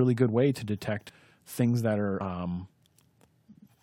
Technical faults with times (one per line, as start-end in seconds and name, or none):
1.08 compressed frames skipped
2.19 compressed frames skipped